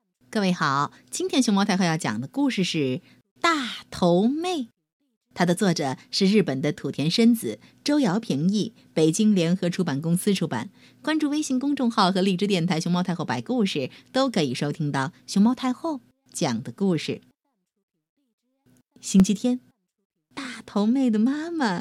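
A block of digital silence occurs at 19.20 s. For about 1.3 ms, which fits a 64-sample block, the output drops straight to zero and returns with no fade, so the gap is heard as a tick or dip in the speech rather than an audible gap.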